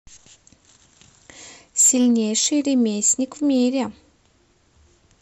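Hard clipping hits the speech three times: from 1.79 to 2.46 s, overdriven by about 14 dB and heard as harsh fuzz; at 3.04 to 3.12 s, about 8 dB; and at 3.54 to 3.63 s, barely over at about 1 dB, a faint crackle. Peaks exceed the stage's ceiling and are sliced off, showing as flat-topped waveform and vertical harmonic smears on the spectrogram.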